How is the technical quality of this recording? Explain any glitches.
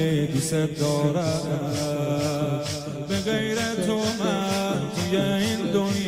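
No glitches or faults heard.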